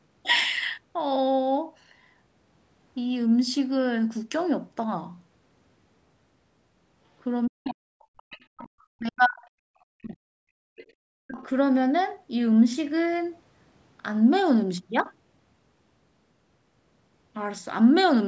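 From 7.48 to 7.98 s the speech is suppressed in double talk: the level plunges by roughly 40 dB in places, likely because the echo canceller mistook overlapping talk for echo and turned everything down. The waveform shows the envelope collapsing to near silence, and the spectrogram shows harmonics thinning and breaking apart. Over the whole call band, which stops at 8 kHz, the same suppression returns at 8.52 to 9.48 s, 9.94 to 10.69 s and 11.21 to 11.39 s.

The other side's voice leaks through at 7.66 to 7.74 s, 7.99 to 8.46 s and 10.76 to 10.86 s. These are faint scraps some 25 to 30 dB below the speech, likely left over because the echo canceller did not fully remove the loudspeaker sound. On the spectrogram they show as weak, separate harmonic traces.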